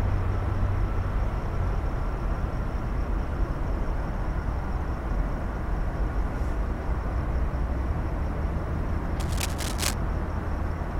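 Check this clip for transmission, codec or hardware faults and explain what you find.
One hardware fault turns up near the end: cable scratch noise from 9.20 to 9.94 s. For about three quarters of a second, dense, uneven scratching and rustling sits over the sound, only a few dB below it. The likely cause is a worn cable, connector or control being moved, so its contact resistance jumps about rapidly. A spectrogram would show ragged broadband streaks across this span, and the waveform would show a burst of irregular spiky noise riding on the signal.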